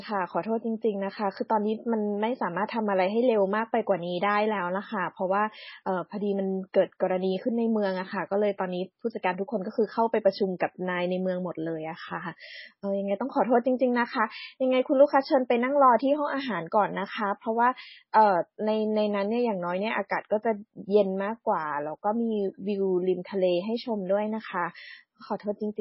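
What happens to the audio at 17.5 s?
At 17.5 s the speech carries the same damage heard across the whole clip, most likely from MP3 compression at a very low bitrate, with heavy damage that fits about 16 kbps. Starved of bits, the encoder has cut everything above 5.6 kHz and keeps dropping weak frequency lines frame to frame, so the speech sounds watery and swirly, with dull s sounds carrying metallic chirps and smeared attacks. A spectrogram shows a hard ceiling at 5.6 kHz and patchy, flickering gaps below it.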